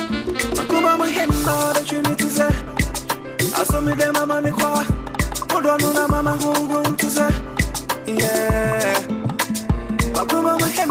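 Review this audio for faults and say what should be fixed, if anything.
No technical faults can be heard anywhere in the recording. There is nothing here that needs fixing.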